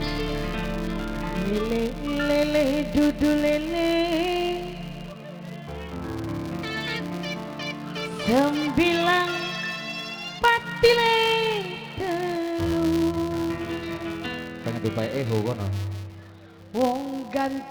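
From start to finish there's a buzz at 200 Hz riding along with the sound, and it's the classic filter restarted on every block. The filter is dropping its memory at each block boundary and starting again from silence, so every block opens with a tiny transient. Those clicks line up into a steady tone at the block rate, which points to blocks about 5 ms long, and the buzz gets louder and quieter with the level of the sound.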